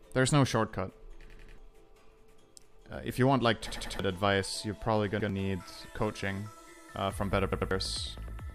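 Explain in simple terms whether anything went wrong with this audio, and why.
The playback device ran short of fresh audio four times and filled each gap by replaying its last chunk, a fault called a repeated buffer. Each chunk lasts about 93 ms, which fits a 4096-sample buffer. You hear a short stutter, the same sliver looping with hard joins, at 1.30–1.58 s and 3.72–3.99 s (three repeats each), 5.20–5.29 s (one), and 7.52–7.71 s (two). Roughly 100 to 300 ms of real audio goes missing at each spot.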